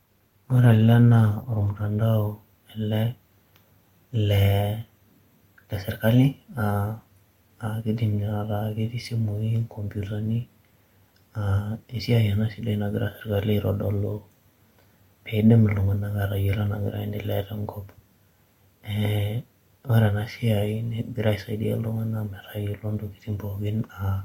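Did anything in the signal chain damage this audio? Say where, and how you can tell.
Yes, at playback: an adaptive stream starting at a low bitrate. The treble is dull and smeared until 2.0 s, then clears suddenly with no gap, unlike a dropout.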